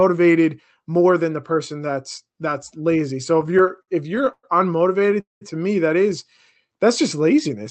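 Speech over a call path whose spectrogram stops near 8 kHz shows repeated stalls (stutter) from 3.41 to 4.45 s. There are twelve brief gaps, the longest 111 ms, covering about a quarter of that span. Packets arrived slower than playback, so the jitter buffer kept emptying and the receiver stretched the last sound. On a spectrogram this looks like smeared, repeated frames. A call audio freeze follows from 5.20 to 5.43 s, just before "to me that is". Packets were likely held up until the buffer ran dry. The concealed sound fades into 160 ms of silence, visible as a flat gap in the waveform before speech resumes.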